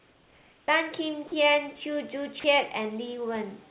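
From the start to 0.68 s you're not hearing the real room at all; that's comfort noise in place of the background. The sender most likely stopped transmitting while its voice detector heard nothing, and the receiver filled the gap with synthetic hiss. It's smooth and featureless, about 4 dB quieter than the actual room, which sits about 35 dB below the loud parts. When real audio resumes, the background gets a bit louder and picks up its texture again.

Right at 0.66 s there's an onset clipped by the voice detector. About 20 ms of the start didn't make it through, likely because the detector reacted late to the sound coming back, so comfort noise sat where the beginning should be. The result is an abrupt start with no soft lead-in, as if the sound snaps on mid-attack.

Then there are two short spots of sound dropped by the voice detector, from 1.28 to 1.32 s and from 2.40 to 2.44 s. Each time about 40 ms of the actual sound is swapped for that same steady noise, likely because the detector briefly took a quiet stretch for background and stopped sending. 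You hear a tiny flat hole, and then the sound picks up again. It's all over the top of a call path with nothing above 4 kHz, which fits G.711 mu-law at 64 kbps, and real room noise about 36 dB under the speech.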